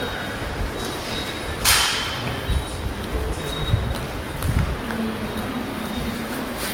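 Throughout, the sound carries the artefacts of different codecs heard together, likely from transcoding between lossy codecs, consistent with low-rate Opus re-encoded as Vorbis; a spectrogram shows everything stopping near 16.6 kHz.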